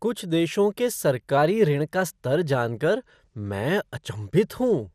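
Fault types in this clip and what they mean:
MP2 compression: The whole clip sounds dull and a bit gurgly, with nothing above 15 kHz and upper bands clearly dropping in and out. That's likely low-rate MPEG Layer II coding starving its sub-bands of bits, which fits something around 80 kbps.
Drift correction step: From 1.38 to 2.18 s the speech runs about 5.7% fast and sits roughly 96 cents sharp, close to a semitone, then snaps back. That's likely clock-matching software briefly bumping the playback rate to rebalance its buffer.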